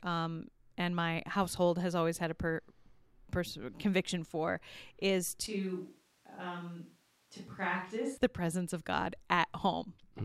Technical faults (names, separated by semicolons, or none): switch to a distant microphone